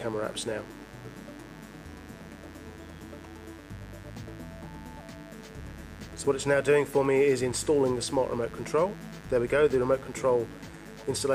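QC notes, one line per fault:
throughout, mains buzz: a steady, raspy buzz sits under the sound for the whole clip, sitting roughly 20 dB below it. It comes from the 50 Hz supply. Sharp switching spikes, of the kind a dimmer, rectifier or poorly shielded cable lets in, land twice per mains cycle. That spreads energy across harmonics of 50 Hz reaching into the kilohertz range, so the tone is gritty rather than a smooth hum.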